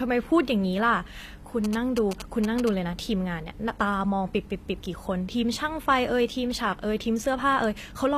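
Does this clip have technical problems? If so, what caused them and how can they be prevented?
Yes. Throughout the speech, the treble sounds synthetic: sibilants come out gritty and lispy, and nothing is present above 14.9 kHz. This points to HE-AAC compression, likely at around 24 kbps, where spectral band replication rebuilds the upper band from copied lower bands. Encoding at a higher bitrate, or with plain AAC, would preserve the real treble.

From 1.64 to 2.69 s there are GSM signalling bursts. A nearby 2G phone's radio bursts get rectified in the audio circuit and produce a galloping pattern of short 217 Hz buzzes, roughly 10 dB below the speech. Keeping phones away from microphones, cables and interfaces, or switching them to airplane mode, prevents this.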